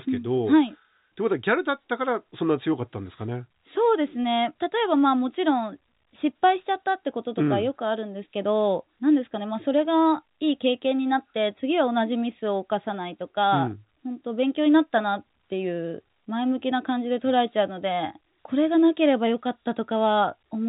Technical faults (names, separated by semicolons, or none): none